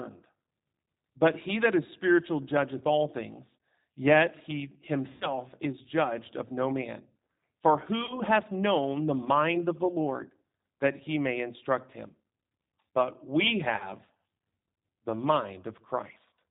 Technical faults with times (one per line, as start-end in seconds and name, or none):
0.00-16.51 G.729 codec
5.12-5.30 VoIP packet loss concealed by the speech codec
8.06-8.22 VoIP packet loss concealed by the speech codec
9.56-9.60 VoIP packet loss concealed by the speech codec
13.77-13.96 VoIP packet loss concealed by the speech codec